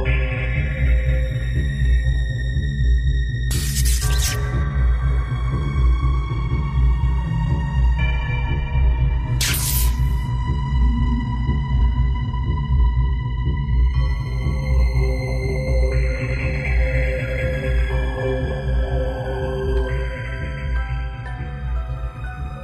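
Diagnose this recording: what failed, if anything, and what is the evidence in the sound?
At the network stage, the adaptive stream fell back to a lower bitrate from 7.59 s to 11.59 s. Quality changes abruptly with no gap, treble turns thin and synthetic, and artefacts rise. A spectrogram shows a hard ceiling at 14.9 kHz there, which fits a switch to HE-AAC at about 24 kbit/s.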